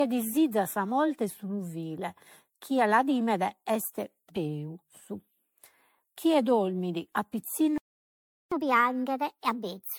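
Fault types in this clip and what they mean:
Generation loss: The speech sounds swirly, smeared and hollow throughout, with blurred attacks. Likely many rounds of MP3 re-encoding stacked their noise and spectral holes.
Playback stall: The speech stops dead mid-flow for about 0.74 s, from 7.78 to 8.52 s. The player likely ran short of data before resuming.
Catch-up at higher speed: From 8.52 s to the end, playback runs 1.25 times fast. Pitch rises roughly four semitones while the player recovers lost time.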